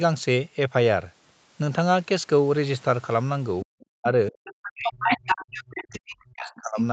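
From 3.64 to 4.35 s, the echo canceller was likely caught in double talk. Unable to separate the talker from the loudspeaker echo, it pulled both down, so the speech is suppressed in double talk. About a fifth of a second of that span is affected, with the level falling by as much as about 40 dB, and the voice breaks up into dips and gaps.

Inside that stretch, at 3.8 to 3.86 s, the other side's voice leaks through as a faint scrap about 35 dB under the speech, likely residual echo the canceller failed to subtract from the microphone.

From 4.44 s to the end, the leakage becomes far stronger. The far voice, again likely uncancelled loudspeaker echo, comes through at roughly the same level as the talker.

At the same time, from 4.73 to 6.78 s, the speech is suppressed in double talk again. The canceller likely ducks the near voice for about two seconds in total, with drops of up to about 40 dB. 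The talker fades and chops.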